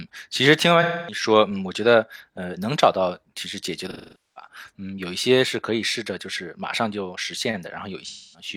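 At 0.82 to 1.23 s, 3.90 to 4.48 s (the longest, about 470 ms) and 8.05 to 8.48 s, the speech smears into a noisy, phasey wash. This is AAC frame loss with concealment: the decoder patches missing frames from the last good spectrum. Unlike a plain dropout, there is no hard gap or click.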